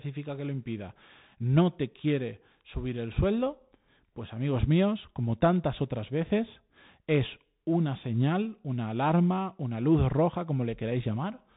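Throughout, the Bluetooth CVSD headset codec cuts everything above 3.8 kHz; unlike plain band-limiting, its lagging one-bit step scratches s sounds over granular hiss.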